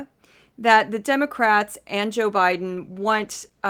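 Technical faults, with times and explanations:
2.52–3.70 s, call bitrate drop: speech turns rough and watery through the end, which fits the encoder falling from about 32 to 14 kbps.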